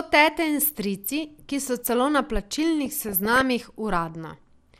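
MP2 compression runs through the whole speech clip: a dull, granular, gurgling sound, likely from a starved 80 kbps MPEG Layer II encoder switching off upper sub-bands. DAB burbling follows at 2.86 to 3.41 s, where bit errors of a fraction of a percent slip past correction, putting short blips of noise into single sub-bands.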